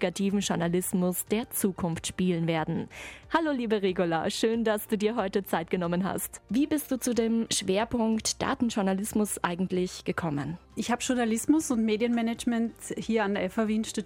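No faults to report anywhere in the clip.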